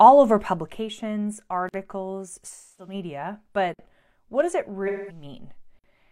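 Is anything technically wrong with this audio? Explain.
Yes, three kinds of fault can be heard in this speech clip.

From 0.40 to 0.81 s there is zipper noise: a fine ticking rides on the sound as the level falls by about 10 dB. The gain moves in unsmoothed steps, roughly fifty per second, and each step leaves a small click.

Hard-edged 50 ms holes appear at 1.69, 3.74 and 5.79 s. This is a gap between chunks: the audio arrives in 2 s chunks, and silence is left at each join. The sound is interrupted there but none of it is missing.

At 2.50 to 2.94 s and 4.87 to 5.24 s the sound turns smeared and noisy. This is AAC frame loss with concealment. About 256 ms and 213 ms of audio are missing, which points to several lost frames each time, and the decoder fills in from the last good spectrum.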